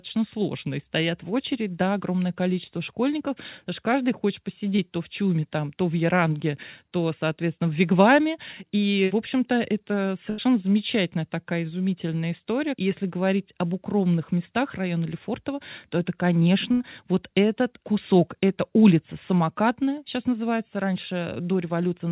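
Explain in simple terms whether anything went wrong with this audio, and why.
A few bits of the call got lost on the way. At 4.76 s, right after "потому что каждый хочет" and before "то в", there's a short concealed packet loss: about 20 ms never arrived, so the receiver stretched the last bit of sound to cover the hole. You hear it as a tiny smear or wobble.

The bigger ones are two bursts of packet loss, each about 80 ms, at 10.3 s, just before "замечательная такая изумительная история", and at 16.72 s, between "то это" and "вот этот кусок эта". Here the receiver held the last sound as a fading buzz or hiss, then jumped ahead, so a sliver of speech is simply gone.

The narrow, phone-like tone, with nothing above 4 kHz, comes from the call's codec itself.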